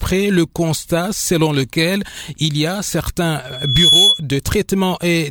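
A microphone picking up its own loudspeaker closed a loop whose gain passed unity at 3.4 kHz, producing loudspeaker feedback squeal from 3.45 to 4.23 s: a single piercing tone swells over just under half a second to roughly 10 dB above the rest of the audio.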